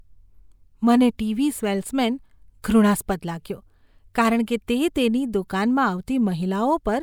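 No technical faults can be heard anywhere in the recording.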